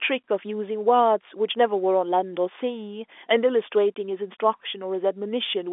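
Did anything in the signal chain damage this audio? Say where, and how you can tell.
No, nothing in the chain has hurt this speech; it sounds like an ordinary G.711 phone line, with the usual narrow telephone band that tops out around 3.7 kHz and leaves nothing above it.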